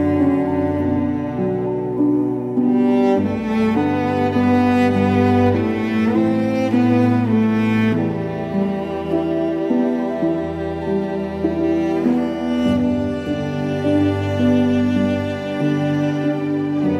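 Nothing is technically wrong with this audio.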